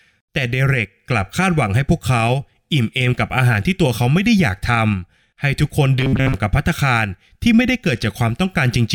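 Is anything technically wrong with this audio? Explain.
Yes. Robotic sound from repeated short buffers runs from 5.99 to 6.34 s. New audio likely arrived too seldom, so playback kept looping a fragment of about 7.5 ms while most of the real speech was skipped, forcing a rigid, metallic 133 Hz buzz.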